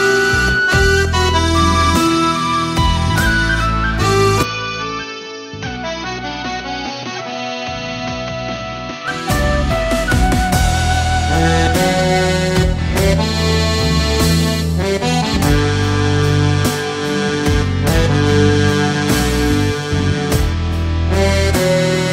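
At 4.43 s the sound abruptly narrows and drops in level. Nothing remains above 6.4 kHz, so it turns dull and boxy. It is also roughly 10 dB quieter, with faint new background noise well below the signal. There is no gap at the change. This likely comes from the input switched to a poorer device, with narrower bandwidth and its own tone and noise. At 9.08 s the original fuller sound returns.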